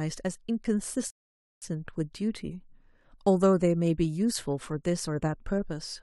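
At 1.10 s the speech halts in a rebuffering stall: the player has exhausted its downloaded audio and waits for more data before continuing. Silence holds until 1.62 s, adding 515 ms, and then the speech picks up at exactly the point where it broke off, with nothing skipped. On a waveform this shows as a flat, near-silent gap; a spectrogram shows a clean blank column with hard edges on either side.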